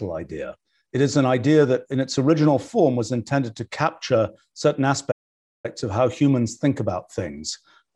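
At 5.11 s, right after "intended to capture certain", the speech cuts out into silence for about 0.53 s and resumes at 5.66 s with "of how humans think". This is a playback stall: the output goes silent in mid-flow and then continues. The likely cause is the player running short of buffered data or its audio thread being blocked, so nothing reached the output until it recovered.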